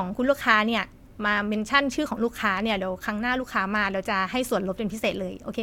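No technical faults can be heard anywhere in this speech recording. Nothing in the signal draws attention at any point.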